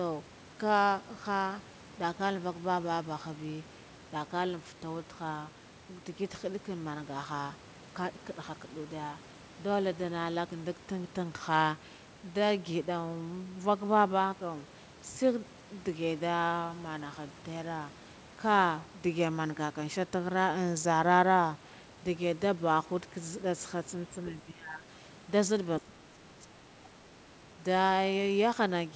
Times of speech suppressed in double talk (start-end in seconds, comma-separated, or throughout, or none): 24.30-24.85, 25.81-27.11